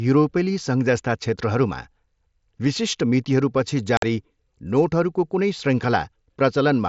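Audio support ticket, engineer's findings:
Speech dropout at 3.97–4.03 s, about 52 ms hole with hard edges. Component: Bluetooth headset radio link. Mechanism: unconcealed Bluetooth headset packet loss; consecutive voice packets missing between headset and phone, gap filled with silence or an idle pattern, no concealment applied. Duration fits roughly seven mSBC frames. Surrounding speech carries the mSBC codec's 8 kHz ceiling and light graininess on loud syllables.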